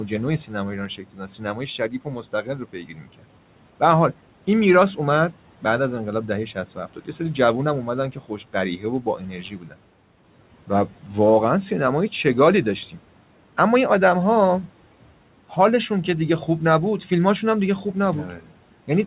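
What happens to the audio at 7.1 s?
At 7.1 s the speech is being cut by the noise suppressor, which acts between 6.55 and 7.2 s. It misreads parts of the speech as background and pulls them down by up to about 12 dB, roughly a tenth of a second in all, so those sounds come across faint and swallowed.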